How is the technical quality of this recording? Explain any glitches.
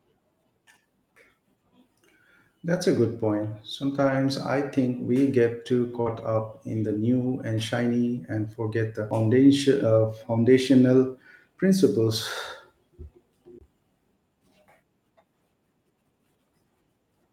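The recording has several brief network and playback glitches, spread across three kinds of fault.

Lost packet rebuilt from error correction, at 2.75–2.77 s just before "a good", 3.97–4.15 s just before "I think we get", and 6.06–6.20 s just after "think we get too". The first lasts 20 ms, fitting one packet. The second lasts 100 ms, fitting five. The third lasts 80 ms, fitting four. The decoder played low-bitrate copies carried in the following packets, so nothing drops out, but those stretches sound rougher and noisier. The absence of any gap or smear is what separates these from concealment.

Short concealed packet loss, at 6.01–6.08 s. About 40 ms never arrived. The receiver filled 42 ms by extending the preceding sound, continuing its pitch if voiced or as shaped noise if not, then crossfaded back. It comes across as a short smear or wobble rather than a coarser copy of the real audio.

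CD skip, at 9.10 s and 13.58–13.61 s. The laser jumped tracks on the disc's spiral, muting for a few milliseconds at 9.10 s and roughly two hundredths of a second at 13.58 s. Each is heard as a tick followed by an abrupt jump in position. That jump distinguishes it from network loss, which patches over time without skipping.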